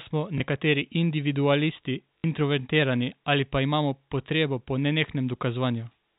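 At 0.38 to 0.40 s, and again from 2.18 to 2.24 s, the speech shows packet loss with the last packet repeated. The receiver filled each gap by replaying the most recent audio, so instead of silence there is a small blip at the first and a brief robotic stutter at the second. The 60 ms run repeats three times, which fits 20 ms packets, and it buzzes near 50 Hz. A plain dropout would leave a hole instead. The telephone-band sound of the G.711 line is heard throughout.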